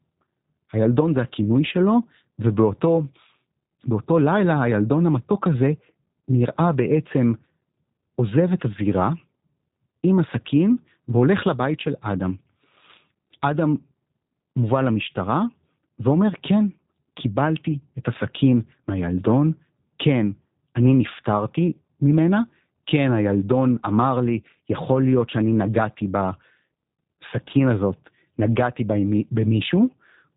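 Throughout, the speech has plainly audible G.729 codec damage, rough and synthetic, consistent with 8 kbit/s coding; a spectrogram shows nothing above 3.8 kHz.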